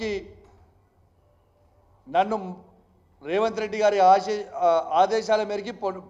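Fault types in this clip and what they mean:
No fault types are present in this clip.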